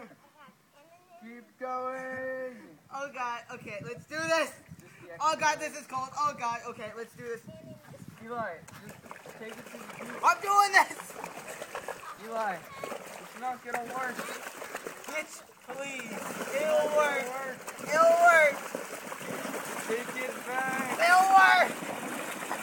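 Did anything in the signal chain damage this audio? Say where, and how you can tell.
Yes. Processor overload crackle hits the buffer stage from 11.78 to 12.18 s. Hard-edged repeats of old audio tear through, fitting about fifteen missed buffers near 10 ms.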